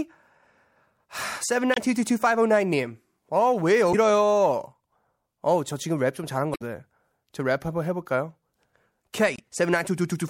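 Damaged data in a compressed stream interrupts the speech at 1.71–1.78, 3.90–3.95, 6.52–6.62 and 9.34–9.40 s. The decoder misreads the corrupt frames and resyncs, producing brief chirps or squawks.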